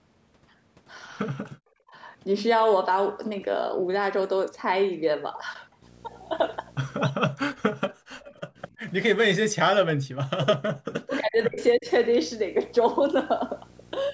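At 1.53 s the room sound behind the speech falls away by about 40 dB and returns at 1.93 s, a dip of roughly 400 ms. This is background gated by the echo canceller: while the far end's audio was playing out of the loudspeaker, the canceller pulled the microphone down hard, taking the ambient sound with it. When it released, the background came back. The same gating recurs from 7.89 to 8.11 s and from 8.46 to 8.82 s, each dip lasting about 200 ms and reaching about 40 dB.

From 5.82 s to the end of the speech, a video or display buzz sits roughly 25 dB under the speech. Its fundamental is at 59.94 Hz, the field rate of the picture, with a harsh hash above it and a thin, very high whine at 15.7 kHz, the line rate. A screen or its cable is coupling into the audio path, and the interference stays present without a break once it starts.

Between 7.28 and 7.61 s the speech itself sinks by around 40 dB for about 300 ms before recovering. 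This is speech suppressed in double talk. Both ends were most likely talking at once, and the echo canceller could not tell the local talker from loudspeaker echo, so it attenuated everything. Longer stretches follow from 9.29 to 10.61 s, with about 1.5 s affected, and from 11.0 to 11.88 s, with about 700 ms affected.

From 8.2 to 8.34 s a faint delayed copy of the speech appears, about 25 dB down and 335 ms behind the original. It is brief. This is an echo leak, probably from a loudspeaker at one end whose canceller failed to strip out everything its microphone picked up, so a little of the returned signal was sent back.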